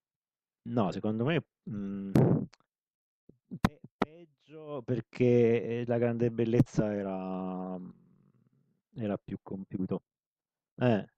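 Right near the start, from about 0.90 to 0.94 s, there's a quick blip where the compressed stream has damaged data. The decoder hits corrupted bytes, misreads those frames and loses sync, so for those 40 ms the speech breaks up until it locks back on.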